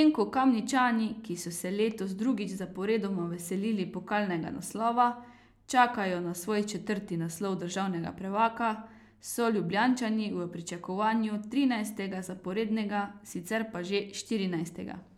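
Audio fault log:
No audible faults were found in this speech recording.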